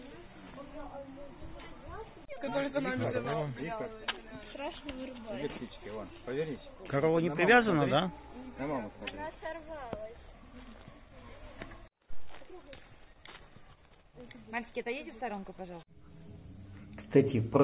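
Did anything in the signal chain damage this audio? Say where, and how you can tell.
No, nothing along the chain seems to have harmed this audio, and there's no point where the sound gives itself away.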